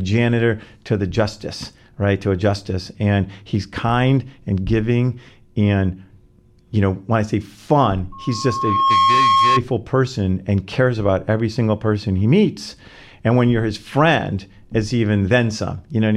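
From 8.12 to 9.62 s a single tone near 1.1 kHz swells in under a second into a squeal that sits a few decibels above the speech. This is loudspeaker feedback squeal: the microphone picked up its own loudspeaker, and at that frequency the loop gain exceeded one, so the tone kept reinforcing itself.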